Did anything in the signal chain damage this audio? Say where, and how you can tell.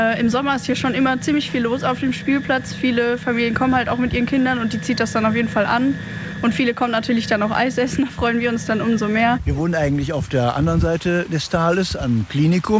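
No, nothing in the chain damaged this audio. It passed through a call path whose codec leaves nothing above 8 kHz, a band limit that fits wideband G.722.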